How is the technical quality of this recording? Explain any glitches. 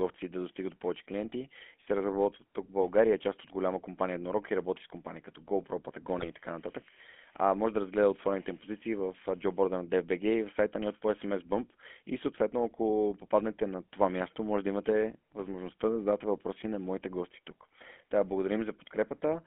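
The technical quality is poor: the whole clip has passed through a GSM full-rate codec, and one short burst of GSM bit errors breaks the speech.

GSM full-rate codec, throughout: The speech was coded by modelling the vocal tract and exciting it with a sparse train of regular pulses, which fits the 13 kbps full-rate scheme. The line passes only about 250 Hz to 3.4 kHz, so the audio is thin and muffled. The coarse excitation adds a plainly audible buzzy, gravelly roughness to the voice.

GSM bit errors, 6.19 to 6.26 s: On an unreliable radio link, corrupted bits reached the decoder. Damaged filter, pitch and gain values then rebuilt a few frames wrongly, bending the spectrum and throwing the level around. For about 70 ms the speech breaks into a squawking, gargled pop, just before "и така нататък а".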